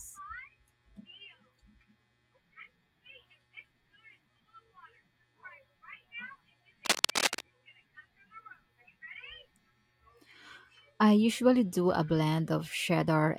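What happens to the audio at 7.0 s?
From 6.85 to 7.41 s, cable scratch noise cuts in: dense, uneven crackling roughly as loud as the speech, likely from a worn connector whose contact resistance fluctuated as it moved.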